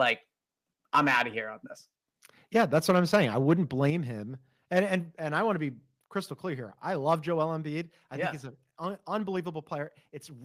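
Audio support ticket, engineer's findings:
Microphone overload, harsh crackle on loudest speech peaks at 0.01–0.1 s, 0.94–1.22 s, 2.59–3.53 s and 3.83–3.9 s. Likely cause is mic input gain set too high, with peaks driven about 3, 6, 6 and 1 dB past converter full scale. On the waveform these show as flat-topped peaks, around 1–2% of samples in those spans. On the spectrogram they show as broadband vertical smearing of harmonics up into the upper kHz range.

Microphone volume stepped down, abrupt drops in voice and background level at 2.91, 3.9, 4.92, 5.94 and 7.98 s. The steps are about 2, 5, 1, 2 and 2 dB. Likely the call software's input gain control reacting to the clipped peaks, since the first two land inside or right after the overload spans. Later steps fall just before "and I want to", between "I want to be" and "crystal clear here I", and before "I yeah think he's". On the waveform the envelope steps down with no ramp. 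On the spectrogram the noise floor darkens in one step across all frequencies.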